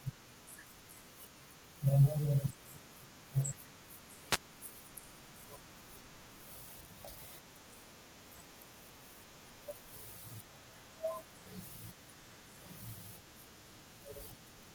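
A wireless microphone noise hit occurs from 4.29 to 4.39 s. The analogue FM radio link briefly faded as reflected signals cancelled at the receiver, letting receiver noise rise over the speech for about 0.1 s, heard as a short swish of static.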